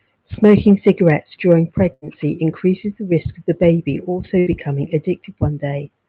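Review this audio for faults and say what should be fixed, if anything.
Two bursts of packet loss, at 1.93 to 2.17 s and 4.39 to 4.64 s: consecutive packets went missing, so the receiver stretched and faded the last sound, then skipped about 60 ms of speech. Adding forward error correction or more jitter-buffer headroom on the network path would help prevent these gaps.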